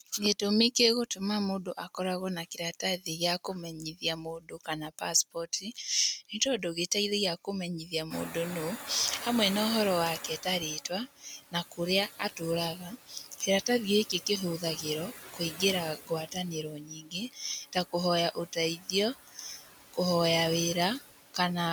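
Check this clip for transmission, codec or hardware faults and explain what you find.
The faults here come from a noise suppressor, not from transmission, codec or hardware problems. Three kinds can be heard.

Noise suppressor artifacts run through the whole speech clip. The suppressor cuts the background by about 14 dB, band by band and frame by frame. It treats steady energy as noise. So the background drops in the gaps and swells back under the talking.

Speech cut by the noise suppressor happens in four stretches. These are 0.0 to 6.77 s, 7.45 to 8.89 s, 10.2 to 13.42 s and 14.09 to 19.98 s. The suppressor mistakes quiet parts of the speech for noise and turns them down. The deepest drops are about 18, 10, 17 and 17 dB. The affected moments add up to roughly a second, a brief fraction of a second, about a second, and about one and a half seconds. Soft consonants and word endings sound swallowed or faint.

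The noise suppressor is catching up from 8.1 to 10.82 s. Around 8 s the room noise jumps by about 22 dB. It then sits about 13 dB under the speech. The room noise itself is part of the recording. The suppressor's noise estimate lags behind this jump. The louder background leaks through with less reduction at first. It then sinks over about 2.7 s as the estimate adapts, settling at about 10 dB of cut.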